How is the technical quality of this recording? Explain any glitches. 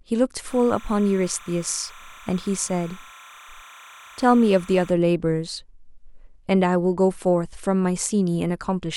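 Timecode bleed sits behind the speech from 0.47 to 4.91 s. Linear timecode leaks from a nearby track or cable, its square wave flipping between pitches near 1 and 2 kHz, well below the speech. Unlike a steady whistle, it chirps and warbles continuously, paced like 30-frame code.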